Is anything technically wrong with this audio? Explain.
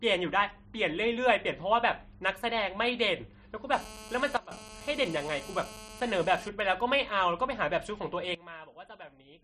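Yes, there are three kinds of fault in this speech clip.

GSM phone buzz, 3.73 to 6.49 s: a 2G phone close by is in a call and transmitting in bursts at about 217 per second. The audio circuitry rectifies those radio pulses into the signal. The result is a hard, raspy 217 Hz buzz full of harmonics, nearly steady and unrelated to the speech, sitting about 17 dB below it.

Sudden gain jump, 4.37 to 4.51 s and 8.35 s to the end: the level drops abruptly, by about 15 dB in the first case and about 18 dB in the second. Speech and background noise fall together, with no fade. The likely cause is a digital gain change applied from one sample to the next without a ramp, such as a setting switch or bit shift. The first drop lasts about 0.14 s before recovering.

GSM signalling bursts, 6.60 to 7.45 s: a nearby phone in a call sends only short groups of bursts while its user is silent. Rectified, these become faint, even ticks with a longer 217 Hz buzz twice a second, well below the speech.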